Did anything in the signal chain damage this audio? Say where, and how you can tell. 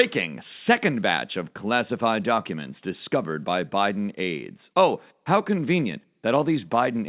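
No, nothing along the chain damaged this speech.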